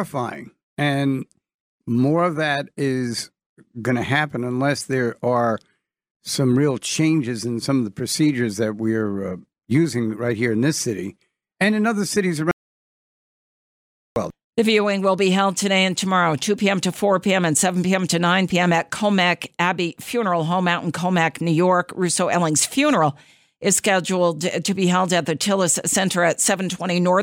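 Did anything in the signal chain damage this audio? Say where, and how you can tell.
Yes. An audio dropout to silence runs from 12.51 to 14.16 s, right after "and in other cities". The speech stops mid-flow into silence with no room tone, then resumes, losing about 1.65 s. That points to the input stage, likely a lost device or link.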